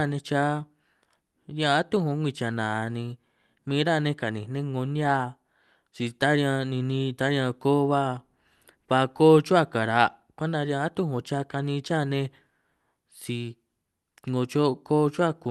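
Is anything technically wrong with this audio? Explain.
No, nothing technically wrong.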